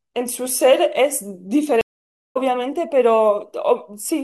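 A stream reconnect breaks the speech at 1.81 s and lasts until 2.37 s. The connection dropped, so the player fell silent for about 0.54 s, re-established the link and started a new decoder partway through the stream. When sound returns, it picks up around a third of a second further on than where it stopped, so that stretch of speech is simply missing. The result is a dead gap followed by an abrupt jump forward.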